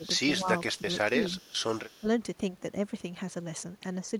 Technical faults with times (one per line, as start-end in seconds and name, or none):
0.00-0.04 speech suppressed in double talk
0.04-0.08 echo leak
0.38-1.24 speech suppressed in double talk
0.58-1.06 echo leak
1.38-2.08 echo leak
2.01-2.05 speech suppressed in double talk